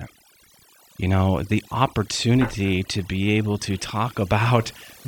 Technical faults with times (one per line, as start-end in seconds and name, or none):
0.00-5.08 overdone noise removal